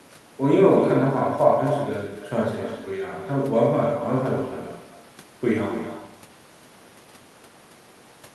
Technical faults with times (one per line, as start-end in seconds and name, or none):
0.00-8.34 echo with no canceller